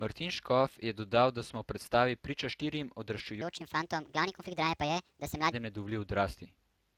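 Speex codec damage runs through the whole of this speech recording, audible from start to finish as a hoarse, grainy, noisy texture on the voice. That is the sign of a CELP coder with too few bits to model the excitation faithfully, and the degree of damage points to a Speex setting around 22 kbps. A section at the wrong speed runs from 3.42 to 5.52 s, where the speech becomes hurried and high, playing about 1.41 times too fast, with pitch raised roughly seven semitones. Speed and pitch shift together and snap back at 5.52 s, which is most likely a player or editor running that stretch against the wrong clock rather than any change in the speaking itself.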